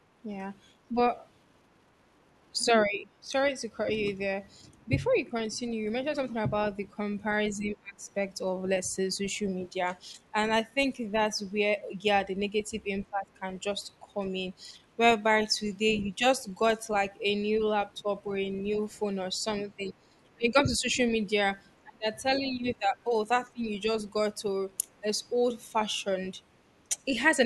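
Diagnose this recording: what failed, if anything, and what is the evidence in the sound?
The call-processing stage's echo canceller likely mistook overlapping talk for echo and suppressed both, causing speech suppressed in double talk. The speech dips at 2.86–3.3 s, 7.57–8.04 s and 13.1–13.29 s, by about 10, 25 and 15 dB. Across 18.02–27.14 s, drops of about 20 dB total roughly one and a half seconds.

The same stage's echo cancellation likely left the far end's loudspeaker sound in the microphone signal, so the other side's voice is leaking through. It appears as a brief scrap at 9.24–9.28 s, about 30 dB down, and as longer stretches at 13.03–18.63 s and 22.33–24.99 s, about 20 and 25 dB below the speech.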